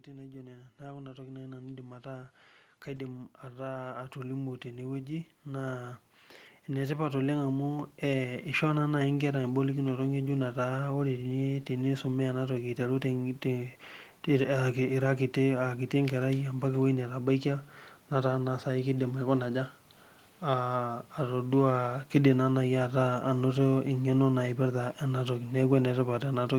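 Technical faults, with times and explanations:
0.05–8.73 s, automatic gain rising: the gain control decided the input was too quiet and kept nudging its gain up, about 18 dB in all, so the voice and the background swell together slowly before levelling off just ahead of "naa naaai inkera ebolokinoto".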